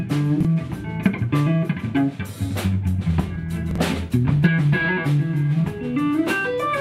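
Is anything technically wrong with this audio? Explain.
Yes. Chunks out of order occur at 0.41–0.45 s and 3.71–3.78 s. A block of about 21.3 ms plays one and then two chunks late, producing a brief jumbled stretch with hard joins.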